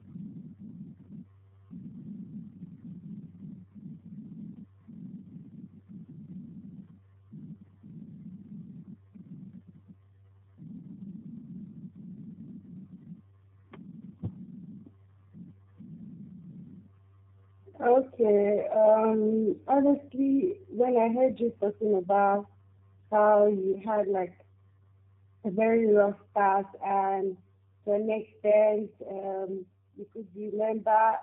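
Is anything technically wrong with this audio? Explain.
Yes. Tandem speech coding runs throughout: the speech passed through two low-rate speech coders in a row, each re-encoding the previous one's degraded output. The sound is rough, muffled and warbly, with nothing above about 3.8 kHz, which fits two 8 kbit/s G.729A-type stages.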